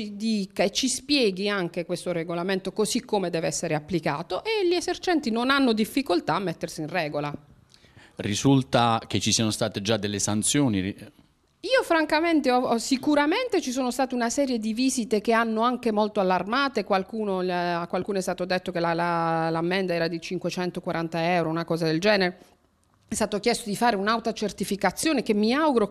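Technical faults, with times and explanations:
No technical faults can be heard anywhere in the clip. There is nothing here that needs a time or an explanation.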